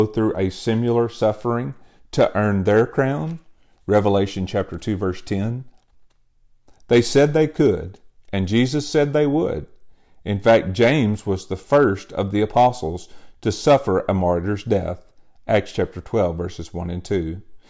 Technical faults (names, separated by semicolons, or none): none